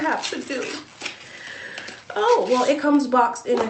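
No technical faults are audible.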